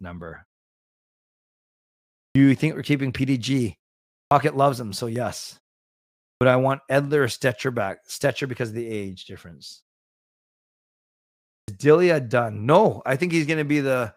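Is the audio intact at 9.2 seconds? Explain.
Yes, the speech at 9.2 seconds is intact, with nothing dropped or damaged at that moment.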